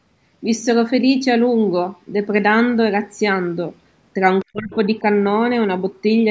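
From 4.41 to 4.45 s a faint second voice, around 40 dB below the talker, slips through, likely the other side's voice leaking through past an incomplete echo canceller. From 4.45 to 4.72 s the talker's speech drops sharply, by roughly 35 dB at its deepest. This is likely speech suppressed in double talk, where the canceller turned everything down while both sides were talking.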